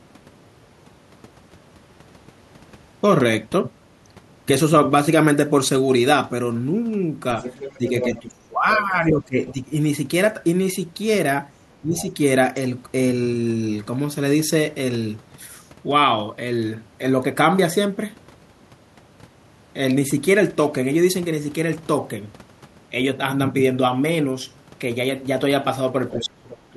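A loudspeaker echo that was likely not fully cancelled lets the other side's voice leak through at 7.4–8.2 s, only about 10 dB under the talker, then as faint scraps at 9.48–9.53 s, 11.97–12.07 s and 26.11–26.24 s, roughly 20 to 25 dB down.

The echo canceller, likely confused by both sides talking at once, suppresses speech in double talk: from 7.78 to 9.75 s the voice sinks by up to about 20 dB in pieces, briefly dips around 10 dB at 11.81–12.07 s, and from 26.15 s to the end drops by about 30 dB.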